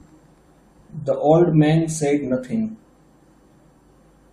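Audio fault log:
No faults detected.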